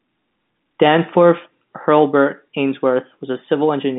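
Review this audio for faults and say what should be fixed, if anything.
Nothing here needs fixing. The speech carries the narrow sound of G.711 telephone coding, with the band running from about 150 Hz to 3.7 kHz and nothing above about 3.8 kHz, which fits the standard 64 kbps A-law telephone format.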